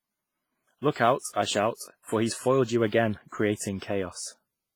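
The speech was most likely squeezed through WMA compression at a low rate, which fits a bitrate around 24 kbps. The transform encoder works in long blocks, so its quantisation noise smears across tens of milliseconds, and at this rate weaker spectral lines are dropped entirely. From start to finish the damage is heavy: consonants and vowels ring and sound washed out, and a hiss swells and recedes along with the speech.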